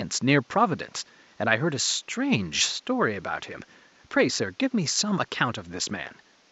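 No technical faults are present in the speech, with only the room's own background noise sitting underneath at about 35 dB below it.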